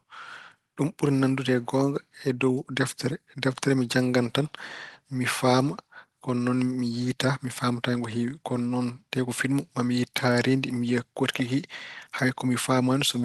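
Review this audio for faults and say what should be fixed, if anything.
No faults turn up in this speech audio, so nothing needs to be fixed.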